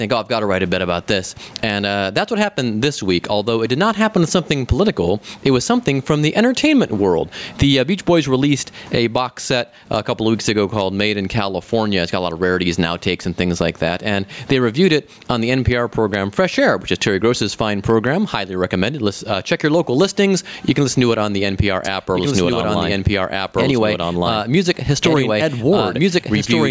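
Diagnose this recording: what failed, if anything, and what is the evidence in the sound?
Gain pumping throughout: the gain ducks by roughly 15 dB under loud sounds, so the waveform envelope breathes. The likely cause is microphone gain set far too high, driving a fast limiter in call processing.

Doubled audio track from 21.85 s to the end: a full-band copy, about as loud, trails by about 1.5 s. It starts abruptly, and the spectrogram shows the same patterns repeated, shifted in time. The likely cause is a second, slower capture path.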